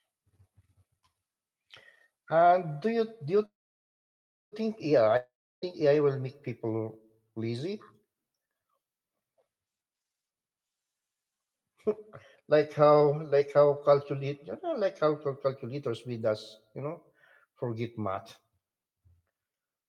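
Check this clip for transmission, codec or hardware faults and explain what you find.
Three transmission faults are present in this speech, heard over an Opus-style call path whose spectrum stops near 12 kHz.

From 3.45 to 4.54 s, a call audio freeze: delayed packets likely starved the jitter buffer. A fading buzz becomes about 1.01 s of flat waveform, adding a gap without losing speech.

From 5.17 to 5.64 s, a long network dropout, likely lost packets: a brief fading tail, then about 0.32 s of silence. Roughly 0.46 s of speech is missing when sound resumes.

From 9.75 to 13.86 s, a jitter buffer speed-up: repeated pitch-period cuts play speech at 126% speed, same pitch. About a second is removed, and spectrogram syllables look compressed in time.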